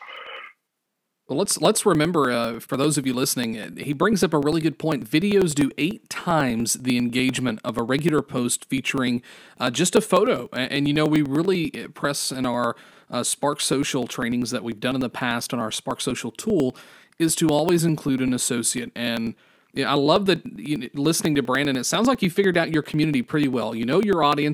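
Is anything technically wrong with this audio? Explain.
Yes. From 0.07 s to 24.4 s the speech carries periodic USB or driver dropouts. About every 0.099 s, a blocked bus or driver skips roughly a millisecond of audio. The result is a steady train of ticks. They sound only where the voice is present.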